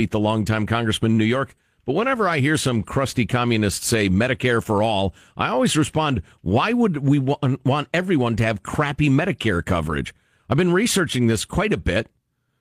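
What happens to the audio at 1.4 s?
Nothing goes wrong at 1.4 s; the speech there plays through intact, with no dropout, click, glitch or distortion.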